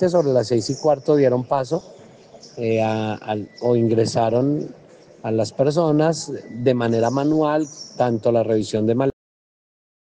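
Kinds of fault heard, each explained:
Cut-off end: The sound stops dead at 9.1 s, right in the middle of whatever it's doing, and the roughly last second is pure digital silence. There's no fade or natural decay, just an abrupt drop to nothing. That's what you get when the final chunks of audio never made it to the file or the output, so the recording simply ends partway through instead of finishing.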